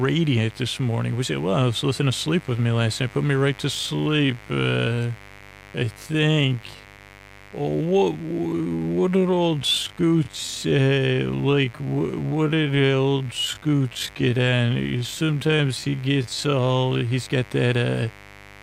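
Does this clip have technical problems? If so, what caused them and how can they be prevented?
Yes. A mains buzz runs through the whole clip, sitting roughly 25 dB below the speech. Sharp switching spikes, such as those from a dimmer, rectifier or unshielded cable, enter the signal twice per 50 Hz cycle, producing a raspy tone rich in harmonics. On a spectrogram it appears as evenly spaced horizontal lines at multiples of 50 Hz, climbing into the kHz range even during pauses. Keeping recording gear away from dimmers and using shielded, properly grounded cables prevents it.

From 3.73 s to 17.11 s the speech runs in a time-stretched section, slowed to about 0.58 times normal speed. The pace drops abruptly while the pitch holds steady. This is likely the result of software repeating short pieces of audio to lengthen the passage without changing pitch. On a waveform, syllables and gaps look stretched. 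On a spectrogram, harmonics stay at the same frequencies but each sound is drawn out horizontally. Editing to length by cutting material, not stretching it, avoids this.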